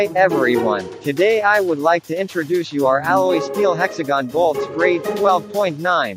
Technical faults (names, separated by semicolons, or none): none